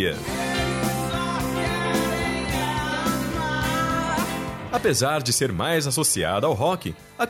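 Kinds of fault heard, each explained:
No technical faults are audible anywhere in the recording.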